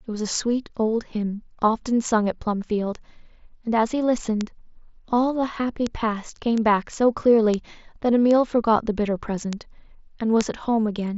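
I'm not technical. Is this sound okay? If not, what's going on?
No. Somewhere along the digital path, single bits in the stored audio flipped, a fault called a bit error spike. Each one pushes one or two samples to a wildly wrong value for a tiny instant before they snap back, so you hear a sharp, clicky tick that has nothing to do with the speech. These ticks land at 4.41, 5.87, 6.58, 7.54, 8.31, 9.53 and 10.41 seconds, heard over the slightly muffled sound of a Bluetooth headset.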